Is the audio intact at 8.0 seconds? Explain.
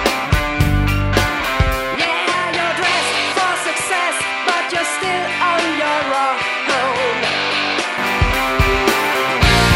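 No, the input likely switched to a poorer device from 1.95 to 7.98 s, so the sound at 8.0 s is just reverting from a duller, about 5 dB quieter band capped near 11.4 kHz.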